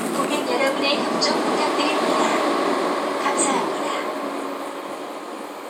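No technical faults can be heard anywhere in this recording of sounds; the signal stays steady and intact throughout.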